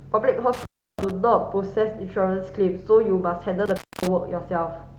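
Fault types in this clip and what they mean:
Intermittent contact: from 0.53 to 1.11 s and again from 3.66 to 4.07 s, a loose plug or cable connection breaks for 333 ms and then 253 ms. The speech drops out abruptly, with crackle at each edge and faint hiss while the line is open.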